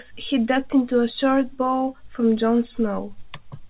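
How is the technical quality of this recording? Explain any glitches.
No glitches or dropouts can be heard anywhere in the recording. The speech comes through a call path with nothing above 4 kHz, the narrowband telephone sound you would expect from a G.711 mu-law link.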